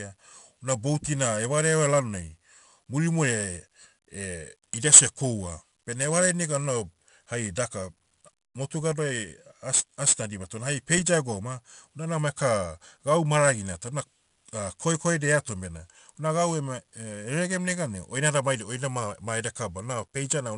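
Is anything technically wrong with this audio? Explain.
Yes, the whole clip carries 4-bit ADPCM compression, and it's plainly audible from start to finish. Each sample is stored as a small 4-bit step from a predicted value, so the coarse steps leave a gritty hiss that rides on the louder speech and smears sharp onsets where the step size can't catch up. The top end is dull too, with nothing above 10.6 kHz, which fits a sample rate around 22 kHz and about 88 kbps.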